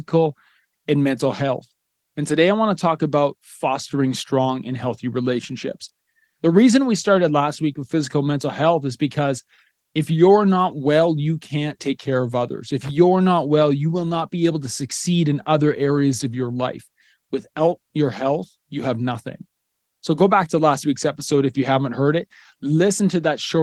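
At 12.82 to 12.91 s a short burst of irregular crackle and scratching cuts through the speech. This is loose connector crackle: a worn or dirty contact briefly makes and breaks, chopping the signal. The Opus voice coding throughout is light.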